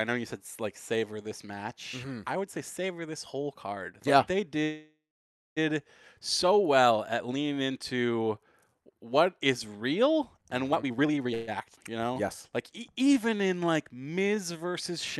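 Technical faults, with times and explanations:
4.63–5.59 s, call audio freeze: The speech stops and the last sound carries on as a fading buzz, then about 0.56 s of silence, 0.93 s in all, before resuming where it left off. The likely cause is delayed packets draining the jitter buffer. On a spectrogram, a smeared copy of the final spectrum fades into a blank band. The waveform shows a decaying tail and then a flat line.
10.72–11.34 s, jitter buffer speed-up: The speech rushes at about 181% of normal speed with the pitch unchanged. Roughly half a second of audio was trimmed, one or a few pitch periods at a time, to reduce excess buffered delay. Syllables and harmonic stretches look compressed along the time axis, and the waveform has small, frequent splice points.
11.34–11.49 s, call audio freeze: A short 0.13 s hold in which the last sound is stretched into a brief buzz with no silent stretch, likely from packets arriving late again right after the speed-up. 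On a spectrogram it looks like a short frozen, smeared band. The waveform shows a repetitive patch before normal speech resumes.
11.75–11.78 s, skip ahead: Playback jumps forward and roughly 0.3 s of speech is lost, with the two sides joined almost directly across a 10 ms fill. Later audio was already waiting, so the dropped stretch was never played. The waveform has an abrupt discontinuity, and the spectrogram a hard vertical seam where formants break.
12.01 s to the end, jitter buffer slow-down: The speech drags at about 92% speed with the same pitch and sounds slightly drawn out. Single pitch periods and bits of pauses were repeated, adding 0.25 s to rebuild the buffer's reserve. Harmonics look stretched in time, and the waveform shows duplicated cycles.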